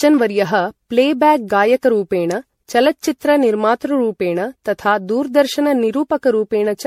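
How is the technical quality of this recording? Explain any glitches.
The quality is poor throughout, with one fault running the full length of the speech. Generation loss: the speech sounds swirly, smeared and hollow, with blurred consonant attacks and nothing above 16.3 kHz. The likely cause is roughly seven passes of lossy encoding, consistent with MP3 at about 64 kbit/s. Each pass requantised on a shifted frame grid, compounding noise and spectral holes. On a spectrogram, expect a hard ceiling and patchy, hole-riddled upper bands.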